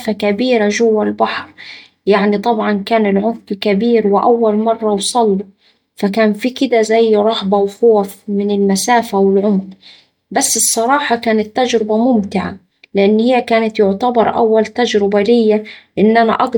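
Nothing goes wrong anywhere in this speech recording, so there's nothing to flag here.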